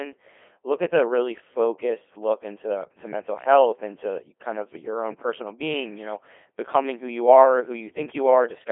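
Codec 2 vocoder damage runs from start to finish: the speech has been rebuilt from pitch, voicing and a coarse spectral envelope rather than its waveform, so it sounds heavily robotic and buzzy, squeezed into a 300 Hz to 3.5 kHz band, which fits a rate near 2.4 kbit/s.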